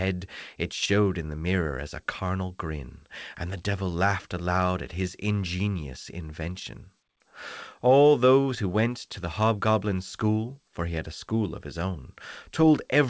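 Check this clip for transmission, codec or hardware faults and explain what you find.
No transmission, codec or hardware faults found; the audio shows an ordinary call path, with nothing above 8 kHz, which fits wideband G.722 at 64 kbps.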